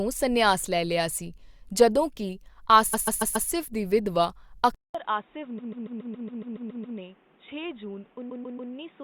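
At 2.93 s, right after "ਲਿਆ ਸੀ ਜਦੋਂ ਕੇ", there's a stutter: a block of roughly 0.14 s of compressed frames plays four extra times, adding about 0.56 s, before "ਦੀ ਵਿਧਵਾ". Those are repeated frames. Then at 4.75 s, after "ਦੀ ਵਿਧਵਾ", there's a 200 ms gap and the sound goes dull and boxy for the rest of the clip. Nothing comes through above 3.8 kHz, it drops about 10 dB, and a new noise floor sits around 30 dB under the signal. That's most likely the input switched to a poorer device. The same repeated-frame stutter comes back at 5.58 s, where the block loops ten extra times and adds about 1.39 s, and again at 8.29 s, with three extra plays adding about 0.42 s.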